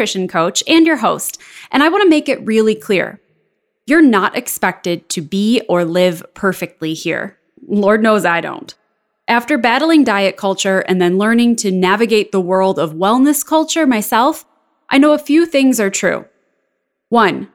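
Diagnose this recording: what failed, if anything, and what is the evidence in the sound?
Nothing failed, and the sound gives no evidence of a fault at any stage of this speech recording.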